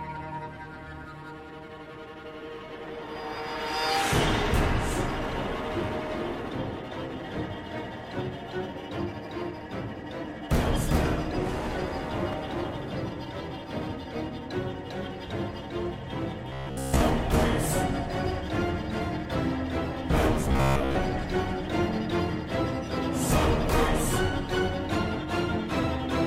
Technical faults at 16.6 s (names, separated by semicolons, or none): robotic sound from repeated short buffers